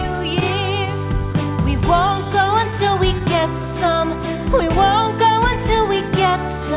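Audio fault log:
Throughout: clock drift between sender and receiver. The sender's clock runs slow, by roughly 2 percent. The receiver's jitter buffer keeps draining as a result. To keep playing, it must stretch or repeat small pieces of audio. Those fixes fall at uneven points, so small timing hiccups recur across the clip. The sound also stops at 4 kHz, which fits the G.711 A-law call codec at 64 kbps on this path.
0.40 to 3.22 s: scattered short gaps. About seven small holes appear in this stretch. None is longer than roughly 15 ms. Together they add up to only about 70 ms, a few percent of the span. The receiver covered each hole by carrying the last sound forward. Nothing drops out. Instead there are brief ticks and slight smears, spread unevenly across these seconds.
2.91 to 6.64 s: repeated timing corrections. Here the receiver keeps inserting short pieces to stay level with the slow sender. 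Playback runs at 98 percent of normal speed. Roughly 70 ms of extra audio is added in total. Every edit goes the same way, lengthening the sound. The spacing between edits is uneven. Each one is small, so it comes through as a faint hiccup or a slightly dragging tempo.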